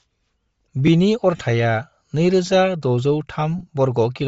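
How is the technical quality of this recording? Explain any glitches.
The recording has two problems: coding damage throughout and two short dropouts.

Throughout the clip the speech has a breathy, grainy edge, and the top end sounds thin and hissy. This is likely Bluetooth LC3 compression. LC3 is the LE Audio codec, and here it is starved of bits, which fits a rate near 32 kbps with 7.5 ms frames. It discards much of the upper spectrum and fills the gaps with noise. That noise is the grain you hear.

From 1.36 to 1.39 s there are lost LE Audio frames. About 30 ms of audio is missing, which points to four consecutive frames. The decoder reuses the last spectrum it received with randomised signs. The speech briefly turns into a noisy smear instead of a hard gap.

From 3.58 to 3.69 s more LE Audio frames are lost. Again about 30 ms is gone, but here it is scattered across roughly 90 ms in short gaps of only a few milliseconds each. 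The concealment fills each gap with smeared noise, so the speech is smeared with noise over that stretch.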